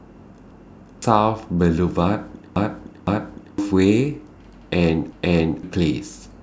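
Repeated buffer at 0.51, 2.56 and 5.12 s: new audio came late, so a 512 ms chunk replays once, then twice, then once again, each with a hard-joined stutter.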